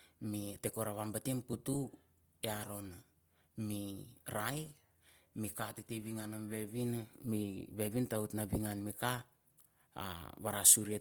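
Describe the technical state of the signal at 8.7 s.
At 8.7 s the speech sounds rough and grainy throughout the clip, likely from Opus compression in music mode, whose noise-filled bands fit a rate near 24 kbps.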